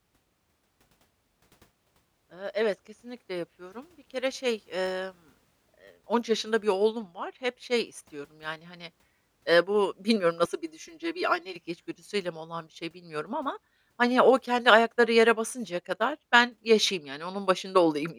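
From 10.45 to 11.56 s, between "hani eee bu bilmiyorum" and "içgüdüsüyle mi olan bir", one channel runs late by roughly 3 ms and is then summed with the other, producing channel delay (comb filtering). The offset makes the two copies of the speech cancel at a string of evenly spaced frequencies, the first around 150 Hz, with further notches at regular intervals above it. For that second the voice turns hollow and phasey, thinned by the fixed gaps in its spectrum.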